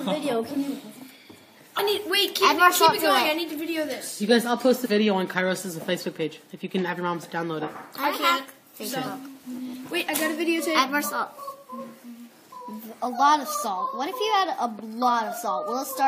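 At 1.78, 4.84 and 11.51 s, compressed frames are skipped. The audio jumps ahead by about three, three, then two 23.2 ms frames, leaving smeared blips that show as small waveform discontinuities and brief spectrogram smudges.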